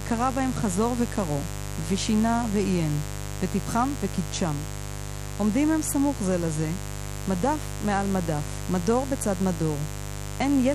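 A steady, raspy mains buzz sits under the speech from start to finish, roughly 10 dB down. Switching spikes on the 50 Hz supply leak in, spraying harmonics into the kHz range.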